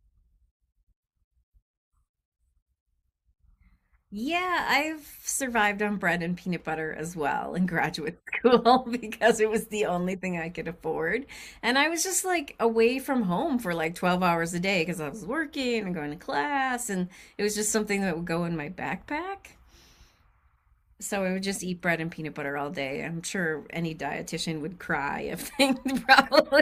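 No technical faults are audible.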